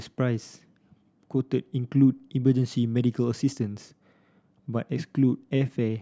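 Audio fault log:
No faults detected in this speech recording.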